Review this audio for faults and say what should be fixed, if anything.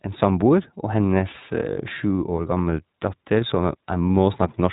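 The speech carries iLBC codec damage throughout. Nothing above 3.8 kHz survives, so a spectrogram shows a flat ceiling with empty space above it. Each short block, which fits 20 ms frames, is coded independently, leaving the speech plainly rough and synthetic. To prevent this, carry the audio over a wideband codec or an uncompressed path instead of iLBC.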